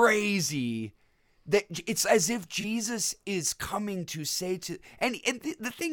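At 2.61 to 2.64 s there's a corrupt frame concealed: the AAC decoder caught damaged bits and papered over them, which fits a single bad frame. The concealed stretch in the speech lasts about 37 ms.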